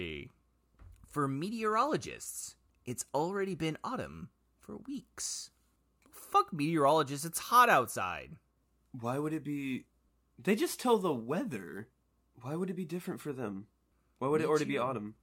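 A speech recording with sample clock jitter from 8.95 to 13.29 s. The converter's clock wanders by a few microseconds, so samples land early or late. Steep waveform slopes suffer most. A hiss, roughly 30 dB down, rises on loud, bright syllables and vanishes in pauses.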